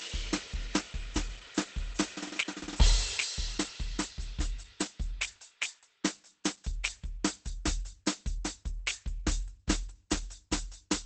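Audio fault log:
throughout: Opus compression, heavy. The music is muffled and hoarse, with nothing above 8.5 kHz. This is likely Opus running at a very low rate, around 12 kbps, where the encoder abandons its music mode for the speech-oriented SILK mode and narrows to wideband. That model treats musical content as speech, so the top octave is cut off and what remains sounds hoarse.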